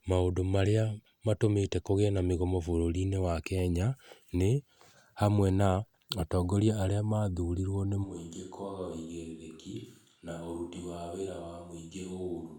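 From 8.06 s, after "atongoria aria mathurirwo nĩ", the speech turns abruptly hollow and noisier, roughly 10 dB quieter to the end: likely a switch to a distant microphone.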